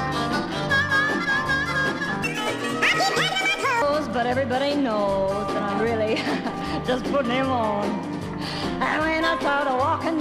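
This audio has a section at the wrong speed from 2.24 to 3.82 s, played 1.62 times fast and about seven semitones high, likely from clock mismatch. On a spectrogram, harmonics jump upward and compress in time.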